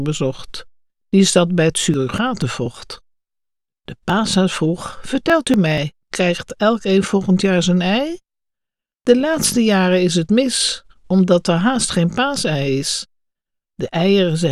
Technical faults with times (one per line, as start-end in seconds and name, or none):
1.70-6.02 periodic USB or driver dropouts